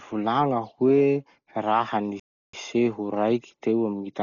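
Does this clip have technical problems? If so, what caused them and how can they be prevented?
Yes. Throughout the speech, the band is narrowed, with dull, rough, fluttering noise. This is likely heavy Dolby Digital compression, consistent with about 40 kbps. To prevent it, encode at a higher bitrate.

From 2.20 to 2.53 s the sound cuts to silence for about 0.34 s, then resumes. This is likely a playback stall from a starved or blocked player. To prevent it, use larger buffers and keep the audio thread unblocked.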